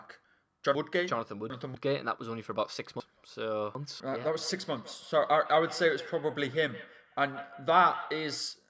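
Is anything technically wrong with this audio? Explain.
Yes, there are two problems. The first is chunks out of order, which happens twice: from 0.75 to 1.75 s and again from 3.0 to 4.0 s. In each span a 250 ms piece of audio turned up late and plays after the three chunks that should follow it. Nothing goes missing, but the sequence gets shuffled, with three hard joins, so you hear a brief jumbled, garbled moment.

The second is feedback echo between two devices, running from 4.11 s to 8.54 s. A second device in the same room is playing back what this microphone sent, and the mic picks it up again. The local echo canceller only removes its own device's playback, so it doesn't catch this. The sound comes back roughly every 150 ms, peaking at about 15 dB below the speech, with a thin, ringing repeat trailing each phrase. The call's microphone processing, which keeps everything under 8 kHz, isn't a fault.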